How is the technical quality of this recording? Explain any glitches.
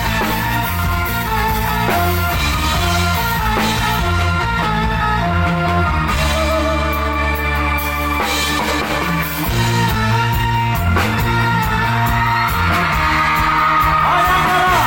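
No glitches or technical faults are audible anywhere here.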